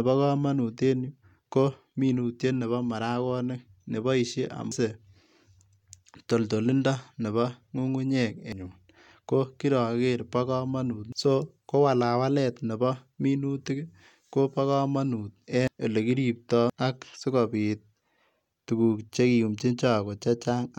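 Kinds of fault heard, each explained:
Compressed frames skipped: whole blocks of the encoded speech never reach the output, either missing from the file or rejected by the decoder as damaged. Playback leaps forward by roughly 0.7 s at 4.72 s (just after "marakonik neboisie"), 8.52, 11.12, 15.68 and 16.70 s, which fits several 92.9 ms frames. Unlike a dropout, no silence is inserted.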